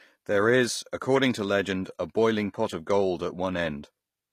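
The speech was likely passed through HE-AAC compression at a low bitrate, around 24 kbps, with the treble rebuilt by copying lower bands upward. Throughout, sibilants sound gritty and metallic rather than natural, and nothing is present above 14.9 kHz.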